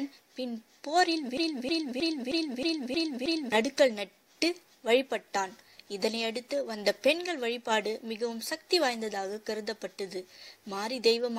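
From about 1.37 s to 3.52 s you get a broken-record loop: a chunk of roughly 0.31 s plays, then plays again exactly, back to back, seven times over, with nothing new getting through. Whatever should have been heard in that stretch of just over two seconds is simply gone. The likely culprit is a player, encoder or stream that stalled and kept pushing out the last fragment it was holding.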